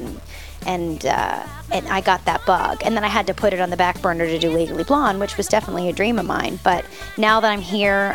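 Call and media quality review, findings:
Grainy distortion tracking the sound throughout. Quiet parts gritty, faintest ones sputter. Likely low bit depth without dither. Fits 8-bit truncation, error about 30 dB down.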